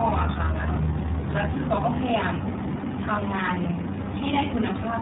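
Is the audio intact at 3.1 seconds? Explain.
No. At 3.1 seconds the sound carries tandem speech coding, which runs through the whole clip. The call was decoded and re-encoded at each network border. The roughness points to three speech coders in a row, the last fitting iLBC, each one compressing the previous one's artefacts. The speech comes out rough, muffled and warbly, with nothing above 3.8 kHz.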